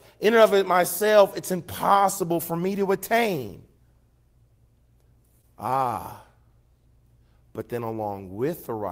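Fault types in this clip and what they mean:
Wireless microphone noise hit, 0.44 to 0.52 s: right after "in and", a burst of static swishes across the speech for about 80 ms before "it myself it's impossible" comes through. The FM radio link from the microphone faded as reflected signals cancelled the direct one, so receiver noise surged up through the audio and briefly masked it, a short hiss rather than a dropout into silence.
Short concealed packet loss, 5.41 to 5.45 s: about 20 ms of audio failed to reach the decoder in time, and the receiver covered roughly 15 ms of that gap by extending the preceding sound, then blended back into the real signal. Across this span of under 40 ms the speech smears or wobbles, and a quick sound in that moment can be lost within the patch.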